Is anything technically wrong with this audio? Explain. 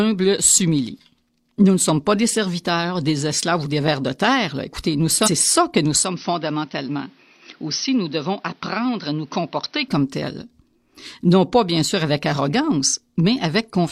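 Yes, there are two faults in this speech recording.

At 5.23 to 5.28 s the sound jumps abruptly forward with a small blip, so part of the programme is missing. This is likely a stream segment skipped: one chunk of the segmented stream failed to load, and the player carried on with the next.

From 6.03 to 9.88 s the speech turns duller and boxier, with nothing above about 6.1 kHz. It is also about 5 dB quieter, over a faint new background noise, before clearing up again. There is no gap at either change. The likely cause is an input switched to a poorer device, a narrower-band input with its own tone and noise.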